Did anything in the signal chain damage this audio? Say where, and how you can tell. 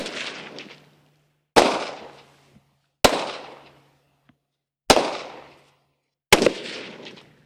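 No, nothing in the signal chain audibly damaged this recording of sounds; it holds steady throughout, with no disruption attributable to any stage between capture and playback.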